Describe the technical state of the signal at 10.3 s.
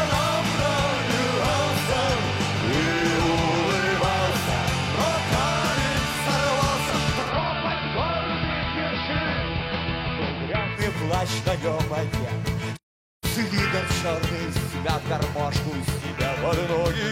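At 10.3 s the receiver has lost the digital stream and blended, over about 130 ms, to the station's AM analogue broadcast, a case of digital radio blending to analogue lasting from 7.19 to 10.84 s. The sound is dull, about 2 dB quieter, and carries faint hiss well below the signal.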